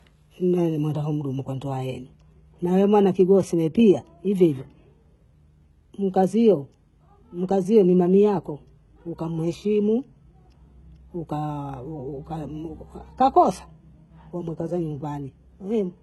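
Throughout the speech, the treble sounds synthetic, with sibilants turning gritty and lispy and nothing above 11.8 kHz. This is likely HE-AAC compression at a very low bitrate, around 16 kbps. Unlike a plain low-pass, the upper band is present but rebuilt from copied lower bands, so harmonics misalign there.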